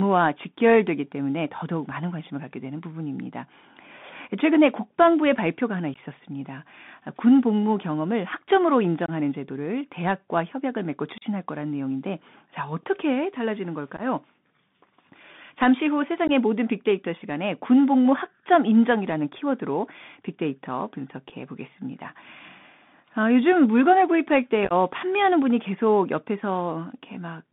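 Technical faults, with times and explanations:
Throughout: Bluetooth CVSD headset codec. The speech passes through a narrowband line of roughly 150 Hz to 3.6 kHz, so it sounds thin and boxed in. Each sample is a single up-or-down bit at 64 kHz, with an adaptive step. Fast, loud high-frequency movement outruns that step and smears into distortion. S sounds turn scratchy. A fine granular hiss sits under everything. The codec damage is plainly audible.
5.94–5.99, 9.06–9.10, 11.18–11.24, 13.97–14.02, 16.28–16.30, 21.29–21.32 and 24.65–24.73: unconcealed Bluetooth headset packet loss. Short voice packets between headset and phone went missing, and silence or an idle pattern filled them. Each event removes roughly 11 to 34 ms of sound. At 5.94, 13.97, 21.29 and 24.65 the gaps are scattered in short runs, up to 15 ms, which sounds like crackle or chopping. The other events are single holes. The edges are hard, and speech returns briefly quieter.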